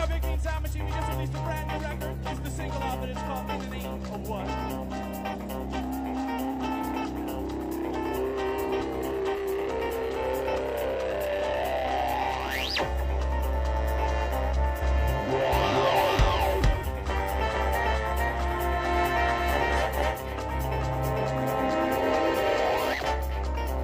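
Compressed frames skipped at 5.31 to 5.37 s, 14.78 to 14.83 s and 19.99 to 20.04 s: the audio lurches forward at each point, losing roughly two, three and five frames (about 100, 150 and 200 ms). The coded frames are 42.7 ms long, which suggests whole blocks of coded audio went missing or were rejected by the decoder as damaged. A doubled audio track runs from 15.53 to 22.93 s. A second, full-band copy of the same audio trails the original by about half a second at about the same level. It has no decay and no room colouring, and it starts and stops abruptly. The likely cause is a second, slower capture path mixed back in, or an edit that left two offset copies stacked.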